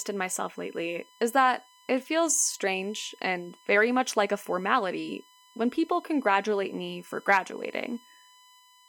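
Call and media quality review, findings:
USB whine throughout speech: steady 1 kHz tone, roughly 30 dB below signal. USB interface or cabling; 1 ms bus-frame current draw leaking into analogue power or ground path.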